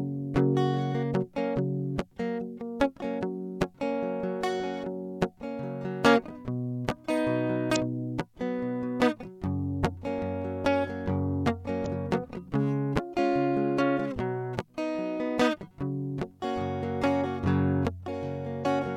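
At 7.72 to 7.76 s, 11.82 to 11.87 s and 18.62 to 18.66 s, the music glitches for roughly 40 ms, the sign of damaged data in a compressed stream. Corrupted bytes make the decoder misread those frames and lose sync until it finds the next valid header. On a spectrogram each appears as a narrow vertical smear of broadband or oddly banded energy.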